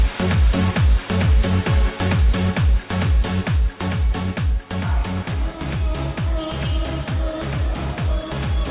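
There are no technical faults to describe in time order, only the call path's expected narrow band with nothing above 4 kHz.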